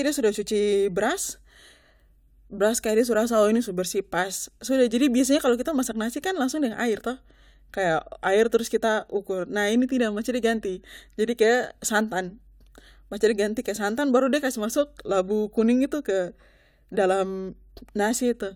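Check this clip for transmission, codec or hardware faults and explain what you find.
Nothing turns up here; the speech runs steady and unbroken the whole way, so there's nothing to flag.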